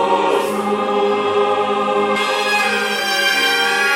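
From 2.16 s to the end, the sound turns thin, bright and hissy, with exaggerated sibilance: pre-emphasis left on. The treble boost applied for recording or transmission was never matched by its de-emphasis cut, leaving the highs about 11 dB above the 1 kHz level at 10 kHz, which fits a J.17 curve. On a spectrogram the upper band brightens abruptly at 2.16 s; the waveform shows sharper, spikier detail there.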